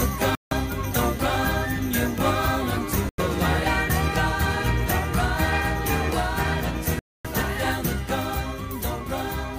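The sound drops to silence three times: 0.35 to 0.53 s, 3.09 to 3.20 s, and 6.99 to 7.27 s. The longest gap lasts about a quarter second. Each time, the audio resumes further along, as if it had played on. This is likely a Bluetooth dropout, with late packets discarded.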